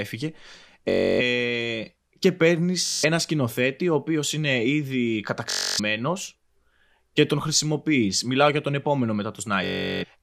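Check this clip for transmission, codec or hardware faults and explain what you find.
Four Bluetooth stutters show up in this speech clip, all the same kind of dropout. They're at 0.90 to 1.21 s, at 2.86 to 3.04 s right after "και παίρνει", at 5.50 to 5.80 s after "ο οποίο είναι ήδη", and at 9.64 to 10.05 s after "για τον επόμενο". Packets went missing or arrived late, and the receiver kept replaying its last short slice, which fits roughly 21 ms frames. You hear that as a buzzy machine-gun stutter lasting about 170 to 380 ms. The speech then jumps ahead as if it had kept going underneath.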